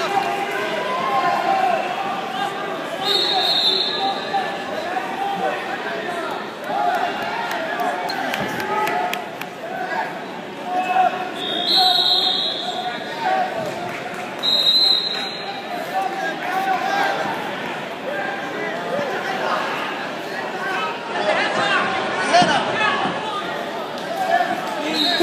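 At 20.87 s there's a digital radio blending to analogue: the receiver loses its digital signal and cross-fades, over about 316 ms, to the station's FM broadcast. You hear a level shift of about 2 dB and a low hiss sitting well under the signal. At 23.48 s it blends back to digital.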